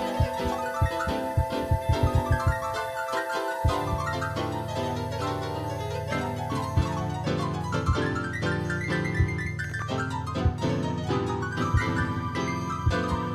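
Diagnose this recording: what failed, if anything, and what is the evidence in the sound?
Something went wrong at the driver or buffer stage: a short burst of processor overload crackle from 9.64 to 9.82 s. The CPU missed a handful of deadlines on buffers only a few milliseconds long, and each miss replayed stale audio with hard edges, giving that gritty tear.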